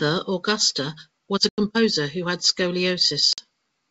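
At 1.49 to 1.60 s, between "was a" and "who had", the speech drops out for about 90 ms, and a shorter gap of about 50 ms follows at 3.33 to 3.40 s. Both are packet loss on an ADPCM call. Runs of packets, roughly ten and five, went missing and were filled with silence. The decoder's adaptive predictor and step size then no longer matched the sender's, so the speech comes back slightly distorted before it settles. On a waveform each gap shows as a flat, hard-edged hole. On a spectrogram it is a blank vertical band. The G.722 wideband coding around the gaps keeps speech clear up to 7 kHz, consistent with 64 kbit/s.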